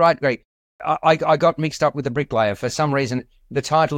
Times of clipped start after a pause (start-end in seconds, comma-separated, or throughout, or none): 0.68-0.80